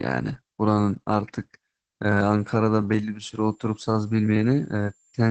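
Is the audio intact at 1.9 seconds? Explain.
No, not really. At 1.9 seconds you're hearing Opus voice compression, and it runs through the whole clip, not just that moment. The speech is going through the SILK linear-prediction coder at a rate that sounds like roughly 12 kbps, so the excitation is coded coarsely and the damage is plainly audible: the voice comes out muffled, a bit hoarse and slightly robotic. There's also nothing above 12.4 kHz.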